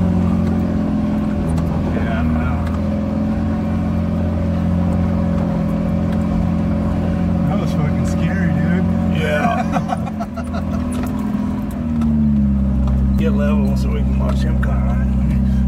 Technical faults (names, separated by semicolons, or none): damaged data in a compressed stream